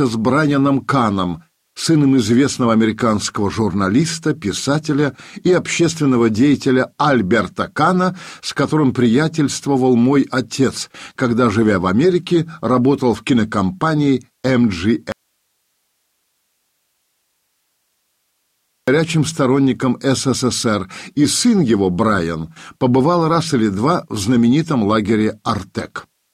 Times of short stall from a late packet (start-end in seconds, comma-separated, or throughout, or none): none